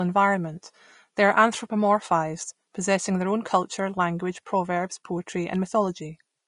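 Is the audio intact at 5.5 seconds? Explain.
No. At 5.5 seconds, as through the whole clip, the speech has most likely passed through low-bitrate Vorbis compression, consistent with roughly 34 kbps. At that rate the encoder drops everything above 10.5 kHz and quantises the remaining treble residue so coarsely that fine detail is replaced by noise of similar energy. The result is a dull top end with plainly audible hiss and graininess, roughened tones and softened consonant attacks.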